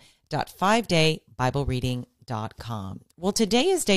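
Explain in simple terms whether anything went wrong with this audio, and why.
Nothing went wrong here: the speech comes through steady and intact, with no dropouts, glitches or distortion anywhere in the recording.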